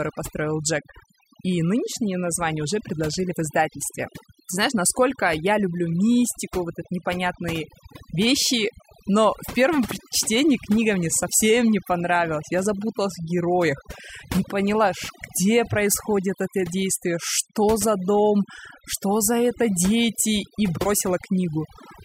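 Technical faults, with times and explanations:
Throughout: overdone noise removal. Aggressive denoising gates individual frequency bands near the noise floor, leaving a blank spectrogram background with isolated flecks, and quiet parts of the speech removed along with the noise.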